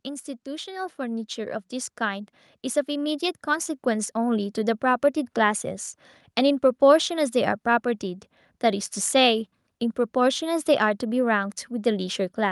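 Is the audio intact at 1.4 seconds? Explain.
No. From 0.44 to 4.9 s the speech and the background noise beneath it swell together, climbing by about 10 dB in all. This is automatic gain rising: the gain control judged the input too quiet and steadily raised its level.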